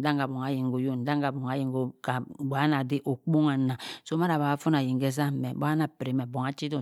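No technical faults can be heard anywhere in the speech recording, and the signal holds steady and continuous throughout.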